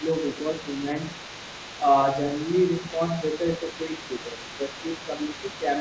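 From 0 to 1.89 s, and again from 2.05 s to the end, the other side's voice leaking through sits faintly underneath, roughly 20 dB down. It is likely loudspeaker echo the canceller missed, and it is set apart from background chatter by following the far talker's rhythm. Speech suppressed in double talk shows as dips of a few decibels at 0.6 to 0.84 s, 2.8 to 3.01 s and, longest, 3.58 to 4.78 s, likely the canceller turning everything down while both sides overlap. Unlike a dropout, the level sags rather than vanishing.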